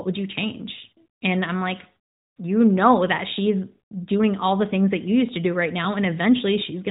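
Just a speech recording carried over a narrowband mobile phone codec, and there's nothing technically wrong to point out here.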